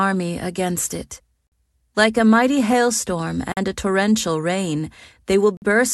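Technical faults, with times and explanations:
1.47–1.52, 3.52–3.57 and 5.57–5.62 s, gap between chunks: the speech stops for 50 ms every 2 s, after "against it" and after "like a mighty hailstorm", as silence is left at each join between chunks. Unlike a dropout, nothing is lost; the sound resumes exactly where it paused.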